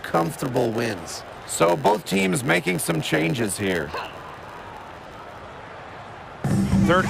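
From the start to 5.41 s, a block size mismatch (padded) fault runs through the audio. Each block handed on is shorter than the block the next stage expects, so the remainder is filled with silence. Those regular gaps produce a buzz at about 91.9 Hz, and the audio plays at 0.919 times normal speed. Unlike a sample-rate mismatch, the slowdown leaves the pitch essentially unchanged, and unlike dropped blocks, nothing is skipped.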